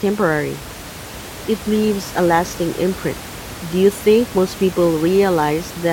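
At 3.11 s the speech jumps forward, a case of compressed frames skipped. A short run of coded frames never reached the output, so about a tenth of a second of audio is lost. The jump fits a few frames of about 23 ms each. On a spectrogram the harmonics shift abruptly at one vertical seam. The waveform shows a sudden change in envelope, with room noise about 15 dB down continuing across the seam.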